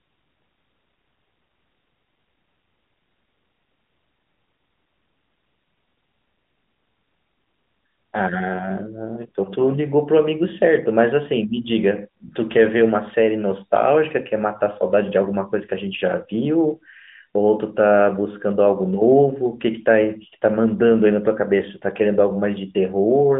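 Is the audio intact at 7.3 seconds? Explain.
Yes, at 7.3 seconds the speech runs on without any dropout, click or other fault, carried through the narrowband AMR-NB mobile codec with its telephone-band sound.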